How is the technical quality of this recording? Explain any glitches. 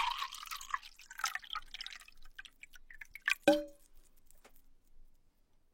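The recording has two audible problems: a steady train of faint ticks running through most of the clip, and two places where the audio jumps forward.

Clock slip clicks run from 0.46 s to 5.41 s, roughly every 0.4 s, about fifteen in all. Each one is a tiny, sharp tick with an evenly spaced rhythm. They are most likely caused by two devices running on unsynchronised clocks that differ by around 50 ppm, so a single sample gets dropped or repeated each time the drift adds up to a whole sample. What sets them apart from random crackle is their regular timing and how small each tick is. They also never change the flow of the sound.

Compressed frames skipped occur at 1.35 to 1.40 s and again at 3.07 to 3.12 s. In each case the decoder stopped playing whole blocks of coded audio, either because they were missing or because they were rejected as damaged. The sound lurches ahead by roughly 200 ms at the first point and roughly 100 ms at the second, which fits about five and about two 46.4 ms frames. 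The gap in continuity is what gives it away. Unlike the clock slips, these are one-off jumps, and the audio is missing a piece.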